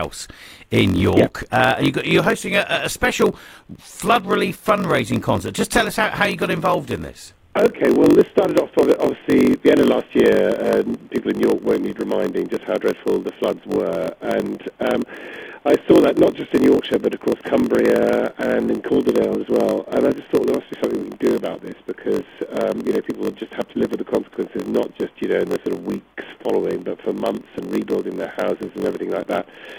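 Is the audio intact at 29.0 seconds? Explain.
No. At 29.0 seconds, as everywhere in the clip, there is a block size mismatch (padded). One stage hands over blocks shorter than the next stage reads, and the shortfall in each block is filled with silence. Those tiny gaps repeat at about 46.9 Hz, heard as a steady low buzz. The spacing fits a 1024-sample read block. The padding also stretches the audio to 0.938 times normal speed, while the timbre stays.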